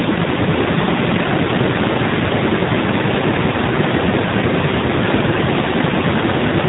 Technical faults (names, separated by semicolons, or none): AMR narrowband mobile codec; echo leak